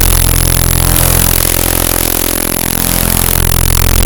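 A recording of sounds with integer overflow throughout: pushed about 1 dB too hot, the loudest peaks wrap to the opposite sign, giving violent cracks far sharper than clipping's flattened distortion.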